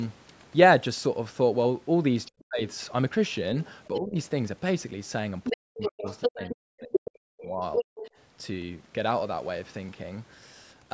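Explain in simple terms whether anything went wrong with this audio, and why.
Yes, two linked problems show up. The first is the other side's voice leaking through: a second voice can be heard faintly from 2.26 to 2.76 s and from 3.63 to 4.0 s, then about as loud as the main talker from 5.44 to 8.1 s. It is likely the talker's loudspeaker being picked up again by the microphone. Unlike background chatter, it appears only in these bursts.

The second is speech suppressed in double talk, where the main voice drops while both sides talk at once. It nearly vanishes from 2.48 to 2.61 s, dips from 3.91 to 4.17 s, and cuts in and out from 5.53 to 7.84 s. The likely cause is the echo canceller turning down the main voice along with the echo. Unlike a dropped connection, this happens only when the second voice is present.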